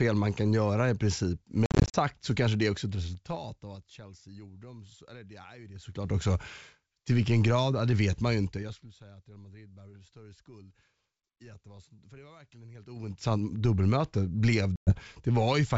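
From 1.66 to 1.96 s, between "kan göra i princip" and "så kanske det", packet loss on an ADPCM call leaves 190 ms of silent gaps scattered over 280 ms, the longest 50 ms. This points to around twenty short packets lost. Each gap shows as a hard-edged blank column. The decoder's predictor loses step, so speech resumes with brief, slight distortion.

Zipper noise follows at 2.65–4.10 s, 5.72–6.14 s and 8.45–8.88 s. The last runs from "det vet man ju" to "säga att". The level moves about 20 dB down, 20 dB up, then 25 dB down, in unsmoothed 3 dB jumps at roughly 5, 15 and 20 steps per second. That makes an audible ticking, with a staircase envelope and faint vertical lines on a spectrogram.

At 14.76–14.96 s, after "dubbelmöte blev", another 110 ms drops out, again with a sharp-edged hole and an unsettled restart.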